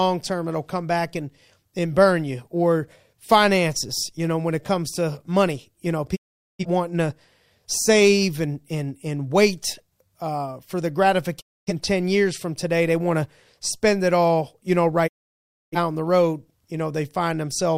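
A digital broadcast dropout, with the receiver losing valid frames and muting, fades the speech to silence over 20 ms at 6.15 s after "to money you know", at 11.39 s after "wait uh for the", and at 15.06 s after "it all you know". The holes last about 0.5, 0.3 and 0.7 s, and the lost material never returns.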